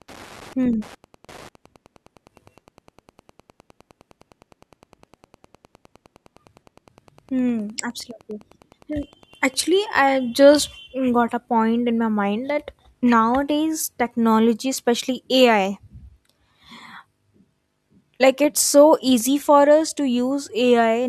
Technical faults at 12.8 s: none

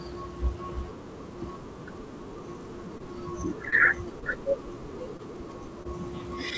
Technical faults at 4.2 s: short concealed packet loss

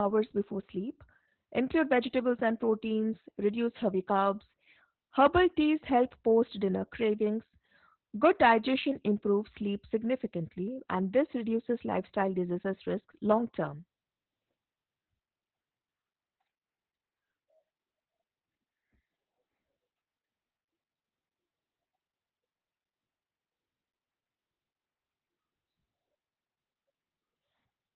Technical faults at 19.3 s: Opus voice compression

